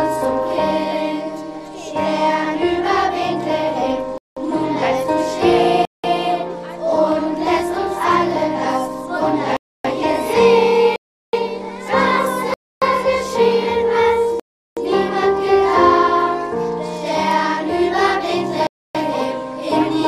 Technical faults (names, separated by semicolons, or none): block of digital silence